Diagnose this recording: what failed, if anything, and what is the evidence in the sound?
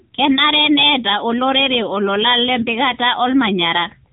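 At the codec stage, the speech went through the AMR narrowband mobile codec at a low mode, which fits a rate near 8 kbps. Nothing above 3.8 kHz survives, and the sparse pulse-driven vocal-tract model leaves a plainly audible buzzy, synthetic edge throughout.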